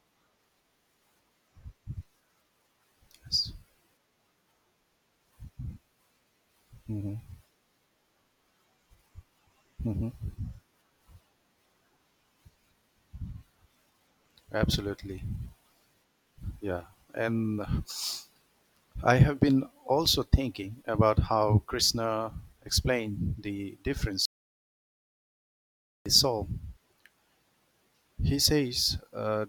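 At 24.25 s the speech cuts off mid-flow in an audio dropout to silence. For about 1.8 s there is silence, with no room tone. The sound returns abruptly at 26.06 s. The input was likely lost while recording continued.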